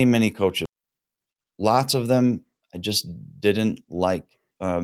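At 0.65 to 0.67 s the speech skips ahead. Roughly a second of audio never reaches the listener. It was dropped in transit or thrown out by an overfull jitter buffer while later audio already sat waiting. Nothing fills the hole. The two sides are butted together almost directly. The delay drops by about a second at that instant.

From 0.76 to 1.71 s comes a jitter buffer speed-up, ending just before "of them I". The buffer still holds more than its target, so the receiver trims tiny pitch-period slices again and again. About 70 ms disappears in total. Playback runs at 108 percent. Pitch stays put, but the speech sounds rushed through that stretch.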